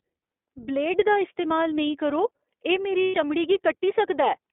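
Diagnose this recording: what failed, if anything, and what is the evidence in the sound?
Narrowband, slightly rough and synthetic speech throughout, limited to roughly 300 Hz to 3.6 kHz. The codec stage is the iLBC codec, which fits its 15.2 kbps, 20 ms frame mode.

From 3.03 to 3.15 s a buzzy, held vowel replaces the speech, then recovers at once. These are lost iLBC frames on the network, about 120 ms, which fits six frames concealed by pitch repetition.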